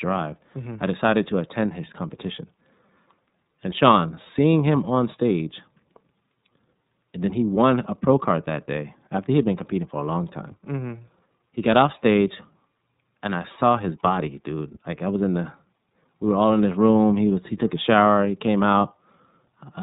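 From start to finish the speech runs through the iLBC codec: band-limited below 4 kHz, rough and synthetic, consistent with about 13.33 kbps in 30 ms frames.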